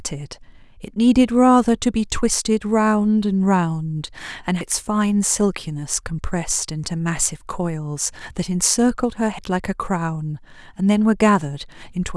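It's a speech clip with two abrupt skips, at 4.61 s and 9.39 s, each losing roughly 150 ms, most likely a dropped buffer (overrun).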